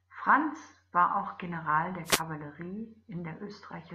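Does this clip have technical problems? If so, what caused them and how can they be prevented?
Yes. A wireless microphone noise hit occurs from 2.04 to 2.22 s. The radio signal fades as reflections cancel, so receiver noise bursts through as static. Better antenna placement and diversity receivers prevent it.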